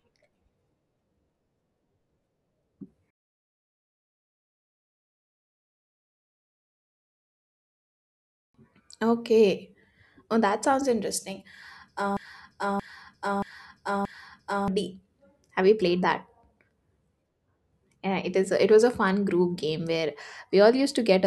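A speech recording that sticks from 12.17 to 14.68 s, where a fragment of about 0.63 s plays four times back to back, a broken-record loop. The speech belonging to that stretch is lost. The likely cause is a stalled player or stream resending its last buffered piece.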